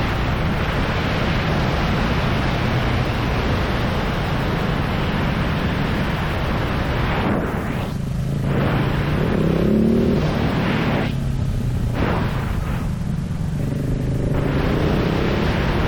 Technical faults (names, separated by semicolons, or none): stuck bit